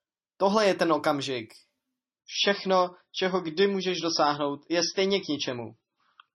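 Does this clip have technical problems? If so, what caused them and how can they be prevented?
Yes. From 2.2 s to the end, the clip shows an adaptive stream at a lower bitrate. The speech switches abruptly, with no gap, to a duller, more artefact-laden sound, and nothing above 6 kHz survives. This fits the player dropping from a 128 kbit/s MP3 rendition to one near 23 kbit/s after the connection slowed. To prevent it, provide a more stable or faster connection, or set a higher minimum bitrate with more buffering.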